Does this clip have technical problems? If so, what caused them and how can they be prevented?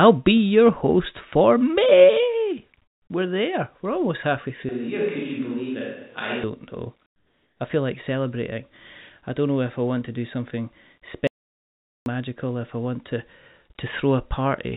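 Yes, four faults of three kinds can be heard.

Comfort noise in place of the background: from 2.82 to 3.10 s, and again from 7.06 to 7.60 s just before "I feel like celebrating", the real background gives way to a flat, featureless hiss, about 10 dB and about 7 dB quieter respectively. This likely comes from discontinuous transmission, where the sender paused and the receiver filled the gap with synthetic noise. Disabling discontinuous transmission on the sending side prevents it.

Switch to a distant microphone: from 4.69 to 6.44 s, right after "almost halfway", the speech abruptly turns roomy and hollow, with thinner bass, a level roughly 5 dB lower and room noise around 35 dB below the speech. The close microphone likely dropped out, leaving a more distant one to carry the sound. Securing and monitoring the close microphone's connection prevents it.

Audio dropout to silence: from 11.27 to 12.06 s, between "want to do something" and "magical if I want", the sound cuts to about 0.79 s of complete silence with no room tone. 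The input was likely lost while the recorder kept writing silence. Checking cables and watching input meters during recording prevents it.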